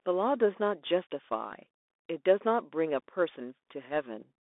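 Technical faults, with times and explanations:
Throughout, Bluetooth CVSD headset codec: the speech sits in a narrow 300 Hz to 3.6 kHz band with nothing above 3.8 kHz. Its one-bit up-or-down coding with an adapting step leaves plainly audible scratchy sibilants, granular hiss and distorted loud highs.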